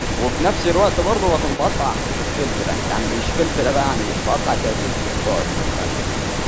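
From start to finish, the speech carries a delayed copy about 0.32 s behind and roughly 10 dB down, likely an echo leak from a speakerphone's echo canceller.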